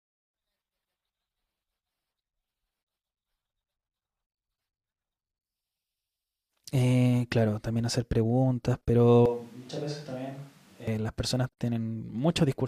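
At 4.53 to 4.56 s a brief glitch cuts through the speech. This is damaged data in a compressed stream: corrupted bytes made the decoder misread those frames, lose sync and skip forward to the next valid frame header.

From 9.26 to 10.88 s the speech suddenly turns hollow and roomy, thinner in the bass and roughly 10 dB quieter, with background noise rising to around 25 dB below the speech before the close sound abruptly returns. This is likely a switch to a distant microphone, standing in for a failed or omitted close one.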